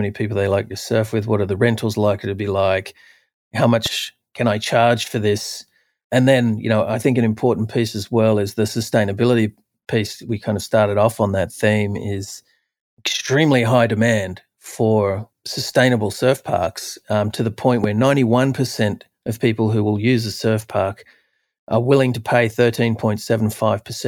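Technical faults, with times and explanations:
3.86–3.88 s and 17.84–17.86 s, loud pop: A single sharp pop lands after "to be like how" and after "um to the point", about 10 and 15 dB above the speech, while the speech carries on underneath. A sudden voltage pulse, likely from a plug, switch or static discharge, was added to the signal.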